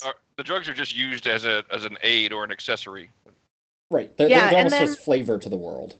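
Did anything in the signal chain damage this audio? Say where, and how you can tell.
Yes, at the network stage: lost packets rebuilt from error correction, around 0.57 to 1.27 s and again 5.17 to 5.31 s. There's no gap, but the sound turns rougher and noisier there, as Opus plays the lower-bitrate backup copies carried in the following packets.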